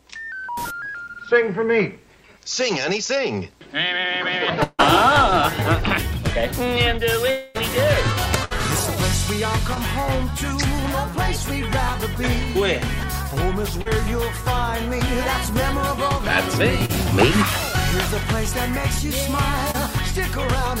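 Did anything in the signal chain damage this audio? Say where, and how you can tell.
Yes, the network stage damaged it. Long network dropouts at 4.63–4.81 s and 7.31–7.57 s leave the sound smeared into a fading buzz or hiss for roughly 150 and 240 ms. The first ends in a brief silent gap, likely from lost packets. A spectrogram shows the held sound decaying there.

A burst of packet loss at 8.45–8.53 s drops about 60 ms. The receiver stretches the last sound and turns it down, so the waveform shows a shrinking, repetitive stretch before the audio resumes further along.

Short concealed packet loss at 9.75, 13.82–13.87, 16.85–16.91 and 19.71–19.76 s loses 20 to 40 ms each time. It's patched with extrapolated sound and heard as a brief smear or wobble. A spectrogram shows a blurred sliver where fine detail vanishes.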